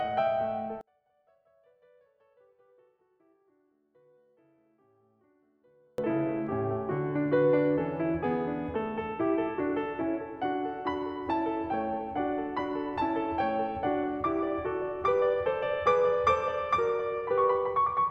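From 0.81 s to 5.98 s the music drops by about 38 dB to a faint residue, which is the signature of one channel inverted. With one side of the stereo pair likely flipped in polarity, everything the two channels share cancels when they are combined. Centred parts and bass collapse, and only the small difference between the channels remains audible until the full signal returns at 5.98 s.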